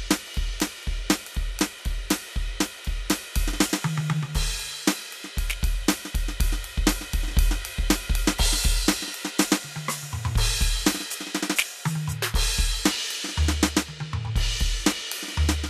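No technical faults occur anywhere in the music, so there are none to describe in time order.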